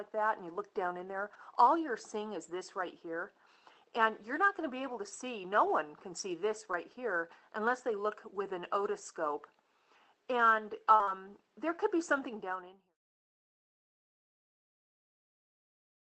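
The audio comes through an Opus call path with its top end cut at 8 kHz and coding noise consistent with roughly 24 kbps. It then fades out smoothly from about 12 s to 12.98 s. Two bursts of short concealed packet loss sit close together, from 10.95 to 11.01 s and from 11.03 to 11.09 s. In each, a stretch of roughly 40 ms never arrived in time. The decoder extended the preceding sound across the hole, about 40 ms the first time and 35 ms the second, then crossfaded back. This comes across as a quick smear or wobble. Overlapping the tail of each burst is a lost packet rebuilt from error correction, at 10.99 to 11.01 s and again at 11.07 to 11.09 s. Each is a 20 ms frame recovered from the low-bitrate redundant copy carried in the following packet. Those frames sound coarser and noisier than the surrounding audio, giving the end of each dropout a grainy edge rather than silence.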